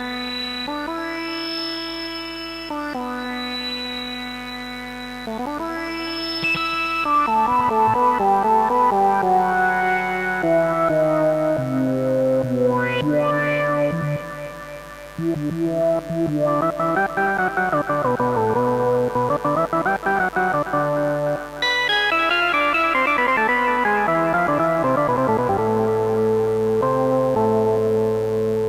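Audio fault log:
Throughout, mains buzz: a steady, raspy buzz sits under the sound for the whole clip, at about 20 dB below the signal. It is built on 50 Hz mains, but sharp switching spikes arriving twice per cycle add harmonics stretching up into several kHz, hence the rasp. A plain hum would be a smooth, low tone near 50 Hz alone, and this fault has that bright, edgy upper spectrum.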